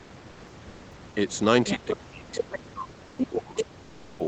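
Speech over a call path whose audio stops at 8 kHz. From 0.31 to 0.43 s, about 120 ms of the real background gives way to a steady, featureless hiss about 1 dB quieter: comfort noise in place of the background, likely from Opus discontinuous transmission filling a pause. The other side's voice leaks through at 1.66–1.97 s, 2.35–2.58 s, 3.17–3.26 s and 3.57–3.65 s, about 5 to 10 dB below the talker's level, likely residual loudspeaker echo the echo canceller missed. From 1.75 to 4.22 s the talker's speech is suppressed in double talk, with repeated deep dips and dropouts totalling around two seconds while the far side is heard, likely the canceller turning both voices down at once.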